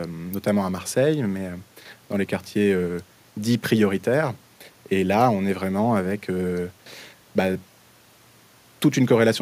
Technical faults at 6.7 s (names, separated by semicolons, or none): none